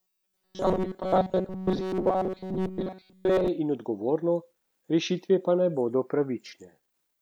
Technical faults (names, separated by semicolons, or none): robotic sound from repeated short buffers